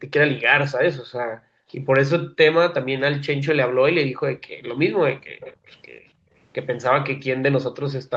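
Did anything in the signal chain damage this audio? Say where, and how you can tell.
Yes. Between 1.31 and 1.72 s, and again from 6.14 to 6.32 s, the background is gated by the echo canceller in the call processing. The room sound ducks by about 40 dB, then about 22 dB, and returns when the canceller lets go.

From 5.28 to 5.74 s there is an echo leak: a separate copy of the speech arrives 319 ms late, about 20 dB down. This is likely the far end's loudspeaker leaking past its canceller, and it is distinct from reverb's smooth decay.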